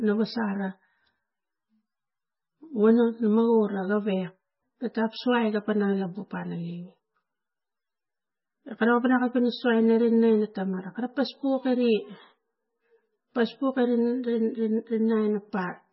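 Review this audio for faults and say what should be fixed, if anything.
MP3 compression throughout: the treble stops dead at 5.6 kHz and weak bands flicker between frames, giving a watery, swirly sound that likely comes from a very low bitrate near 15 kbps. Re-encode from the original source at a higher bitrate, or keep a lossless copy.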